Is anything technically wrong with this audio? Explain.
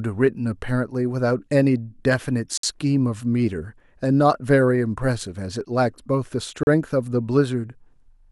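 Yes. There are two gaps between stream segments. The first runs from 2.58 to 2.64 s and the second from 6.63 to 6.67 s. Each is a short, hard-edged hole of silence in the speech, about 58 ms and then 38 ms long. The timestamps of adjacent segments fail to meet, so the player fills the missing span with silence. Nothing is lost. The sound simply stops and resumes abruptly. The spacing fits a stream cut into 2-second segments.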